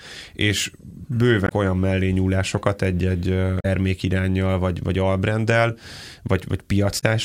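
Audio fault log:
1.45–1.52 s, 3.57–3.65 s, 6.97–7.03 s: damaged data in a compressed stream. Three short glitches break the speech, each lasting about 60 to 90 ms. The first falls just before "olyan mellényúlásokat". Part of the encoded stream was corrupted at these points. The decoder could not read those frames properly. It lost sync and hunted for the next valid frame header. The misread data does not come out as clean sound.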